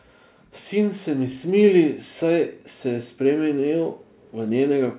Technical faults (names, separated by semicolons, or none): automatic gain rising